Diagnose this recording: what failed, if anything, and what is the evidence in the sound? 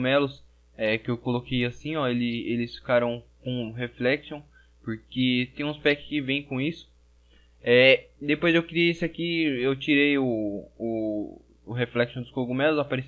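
Nothing in the signal chain gives way here: the level holds steady, and there are no dropouts, clicks, distortion or other disturbances anywhere in the recording.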